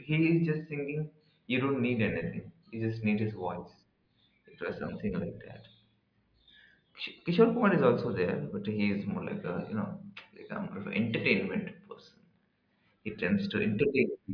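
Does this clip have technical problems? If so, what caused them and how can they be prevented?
No, nothing in this speech recording stood out as a technical problem on listening, so there is nothing to trace or prevent.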